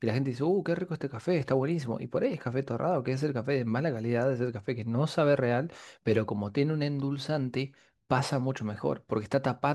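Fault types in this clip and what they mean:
Sample clock jitter: A faint hiss and grainy roughness ride on the speech throughout, growing on loud passages and bright, sharp consonants and dropping away in the pauses. The cause is an unsteady converter clock that takes each sample a little early or late at random, by roughly a microsecond or two. Because the error scales with how fast the waveform is changing, it sits about 45 dB below the speech and follows its level and brightness.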